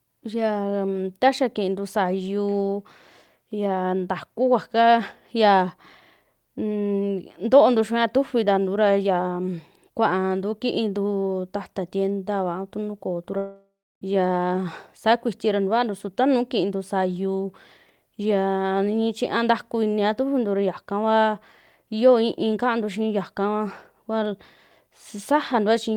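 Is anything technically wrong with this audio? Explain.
Yes. From 13.37 to 14.02 s, after "ah tu nuu koo", a long network dropout likely halts incoming audio. The receiver stretches the last sound into a fading buzz, then about 0.3 s of silence, and "yaa saa" resumes. That is far longer than a brief packet-loss glitch.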